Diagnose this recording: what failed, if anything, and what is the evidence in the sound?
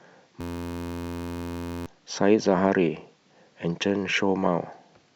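System hang loop at the driver or buffer stage: from 0.41 to 1.86 s the speech becomes a steady 86.1 Hz buzz as one 11.61 ms slice repeats exactly, which fits a 512-sample buffer. Unlike a dropout, nothing goes silent. About a second and a half of speech is replaced.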